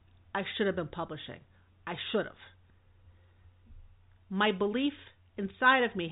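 No technical faults occur at any point in this speech, which comes through G.711 telephone coding with nothing above about 3.9 kHz.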